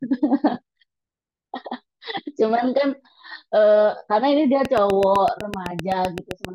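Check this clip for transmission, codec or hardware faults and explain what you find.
One fault stands out, a train of clicks late in the speech. From 4.65 to 6.46 s, about fifteen near-identical clicks tick at a steady 7.8 per second, peaking about 10 dB above the speech. Interference or a struggling interface is the likely cause. Their even spacing and matching shape set them apart from random crackle.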